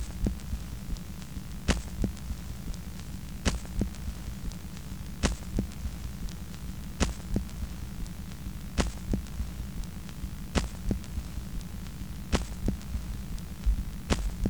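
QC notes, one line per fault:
3.51–4.62 s, train of clicks: a regular ticking at about 13.6 clicks per second, some fifteen near-identical pulses, peaking roughly level with the sound itself, so they sit plainly on top of it. Likely cause is interference or a faulty connection or power supply injecting pulses.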